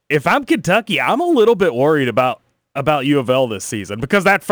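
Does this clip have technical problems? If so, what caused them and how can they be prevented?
Yes. The converter's sampling clock wanders by a few microseconds throughout, so samples land early or late. This causes sample clock jitter, a rough hiss riding about 30 dB below the speech, strongest on loud, bright sounds and gone in pauses. A stable, low-jitter clock source prevents it.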